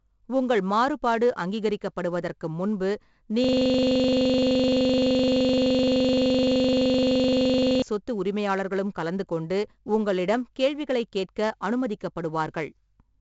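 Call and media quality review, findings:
4-bit ADPCM compression, full clip. Gritty hiss riding on every loud syllable, roughness on sharp onsets where the adaptive step size lags the signal. Nothing above 7.7 kHz, so a dull top end. Heavy damage, consistent with a 64 kbps ADPCM stream: quantisation noise tracks signal level rather than sitting as a fixed floor.

System hang loop, 3.44 to 7.82 s, after "உங்கள் மாறுபாடு அங்கீகரிக்கப்படுவதற்கு முன்பு", before "சொத்து உரிமையாளர்களும் கலந்து கொண்டு". A 42.67 ms segment repeats about a hundred times, a buzz at 23.4 Hz. Fits a 2048-sample ring buffer replaying while the host or driver was frozen.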